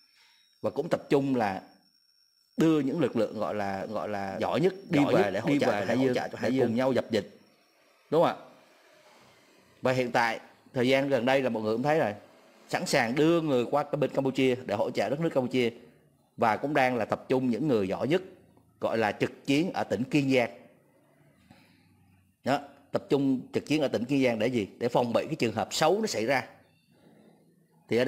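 From 3.81 s to 6.99 s the audio carries a doubled audio track: a second full-band copy runs about half a second behind the original at roughly the same level, with no decay or room colouring, and it cuts in and out abruptly at those times. The likely cause is the same signal being mixed in twice, either captured again through a slower path or left as two out-of-step copies by an edit.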